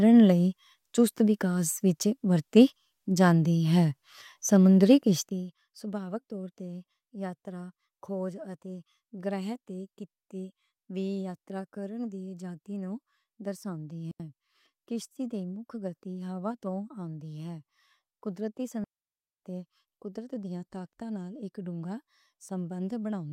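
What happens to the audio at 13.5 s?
Nothing goes wrong at 13.5 s: the speech carries on intact, with no drop, click or sudden jump in level at that point.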